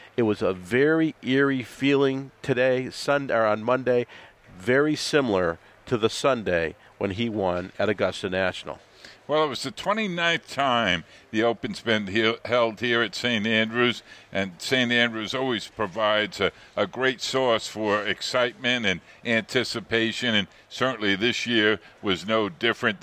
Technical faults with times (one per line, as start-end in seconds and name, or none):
none